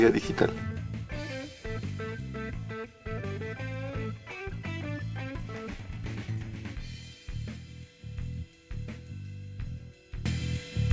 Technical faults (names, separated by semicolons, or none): resampler restarted on every block